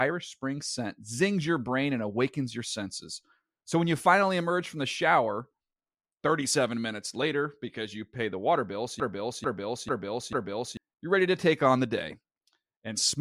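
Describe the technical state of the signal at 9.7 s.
At 9.7 s you're inside a broken-record loop running 9.00 to 10.77 s: a 0.44 s fragment of speech repeats four times back to back, likely from a stalled stream resending its last chunk.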